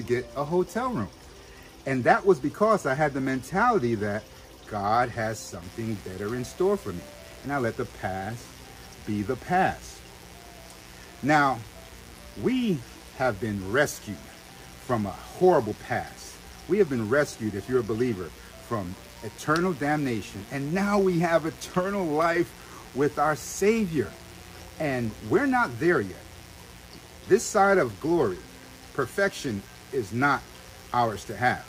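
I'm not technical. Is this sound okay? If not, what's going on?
No, it isn't. From about 5.6 seconds until the end, a steady, raspy mains buzz sits under the sound. It comes from the electricity supply, at 60 Hz. Something like a dimmer switch, a power adapter or an unshielded cable lets sharp electrical spikes leak into the recording. They arrive twice in every power cycle. That makes a harsh, grainy hum, not a smooth one. It is quieter than the main sound.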